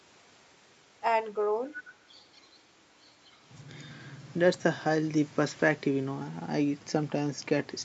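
From 1.64 to 2.61 s, a faint copy of the speech trails the original by about 250 ms. It sits well below the direct sound. A brief, much fainter trace returns at 3.25 to 3.38 s, with the same delay. This is an echo leak. The likely cause is a far-end loudspeaker feeding its microphone, with the echo canceller failing to remove all of it. The residue travels back through the call path, where content stops at 8 kHz.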